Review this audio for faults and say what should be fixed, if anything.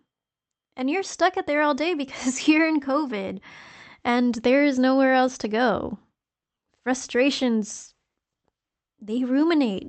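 No faults found and nothing to fix; the speech has the band limit near 8 kHz expected of an Opus call path, which fits a rate around 32 kbps.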